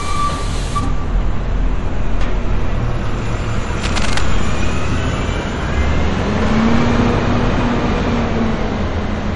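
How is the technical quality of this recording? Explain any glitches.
The recording has two technical problems, one affecting the whole clip and one brief glitch.

Throughout, this is likely low-bitrate audio saved at a high bitrate. An earlier heavy MP3 encode, consistent with roughly 48 kbit/s later re-saved at 192 kbit/s, stripped detail. Nothing remains above 11.3 kHz, so the sound is dull, with lingering coding artefacts.

From 3.79 to 4.23 s there is cable scratch noise, likely from a worn cable or connector being moved. Rapidly shifting contact resistance adds dense, uneven rustling bursts around 10 dB below the sound.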